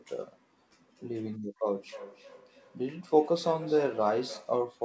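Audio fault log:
1.89–4.67 s, feedback echo between two devices: the speech returns at a steady interval of roughly a third of a second, each pass thinner and more ringing, peaking at about 15 dB below the direct speech. A second device in the room is playing out this microphone's own signal, which the microphone then picks up again. Its echo canceller only removes sound from its own loudspeaker, so the loop passes through the call band-limited at 8 kHz, which fits a wideband codec such as G.722.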